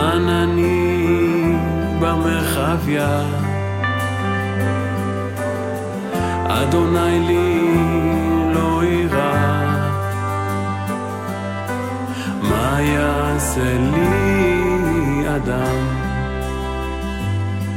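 Listening through, nothing in the sound stood out as a technical problem at any point.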